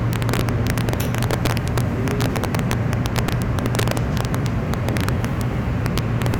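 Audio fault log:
Throughout: integer overflow. Loud peaks were pushed about 4 dB beyond the largest value the integer format can hold, and instead of being held at the limit they wrapped around to the opposite extreme. Only a small fraction of samples, under one percent, go over, but each one jumps across the whole range, producing sharp, violent cracks on the loudest moments. Clipping would flatten those peaks into a duller buzzy distortion; these cracks are far harsher.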